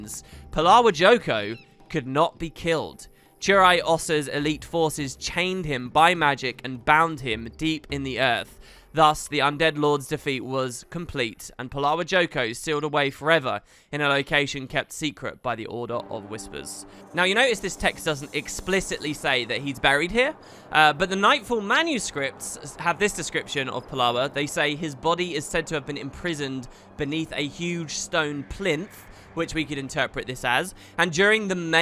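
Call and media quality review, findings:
No faults found; nothing here needs action.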